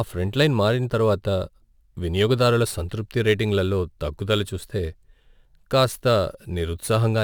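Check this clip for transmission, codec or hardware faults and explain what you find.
One fault runs through the whole clip. Crude rate conversion affects all the speech. Samples were repeated by nearest-sample picking, with no filtering, in a way that fits a 44.1 kHz to 48 kHz conversion. This leaves an inharmonic fizz about 30 dB below the speech that follows loud and bright sounds. Clipping distortion would instead add harmonics locked to the pitch.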